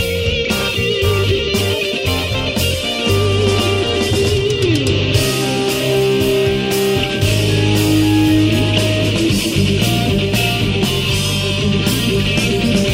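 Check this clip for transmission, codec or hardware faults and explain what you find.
Nothing faulty can be heard anywhere in this clip.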